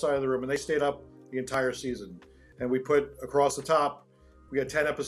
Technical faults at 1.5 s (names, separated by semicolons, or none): audio missing between chunks